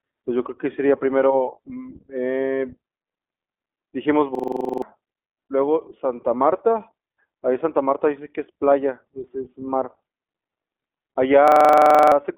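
iLBC codec, throughout: The whole clip carries narrowband speech coding, with the spectrum closed off above about 3.8 kHz and the low end thinning below roughly 250 Hz. This gives the telephone-line sound. The coder rebuilds the excitation of each 20 ms block on its own, without leaning on the block before. Its plainly audible damage is a rough, slightly synthetic grain on the speech, which fits the 15.2 kbps mode.

System hang loop, 4.35 to 4.82 s and 11.48 to 12.12 s: In both spans the host stalled while the sound hardware kept replaying the same ring buffer. One slice of about 43 ms, which fits a 2048-sample buffer, repeats exactly, 11 times and then 15 times. At 23.4 Hz the repeats form a hard, machine-gun stutter. Roughly half a second of real audio is lost in the first span and about 0.7 s in the second.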